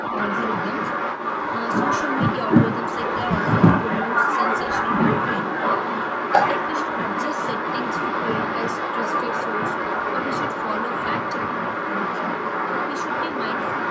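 From the start right through to 13.9 s there's an echo leak: a second copy of the speech trails about 0.32 s behind, roughly as loud as the original or a bit louder. That's likely a far-end speakerphone whose echo canceller let its own pickup slip back into the call.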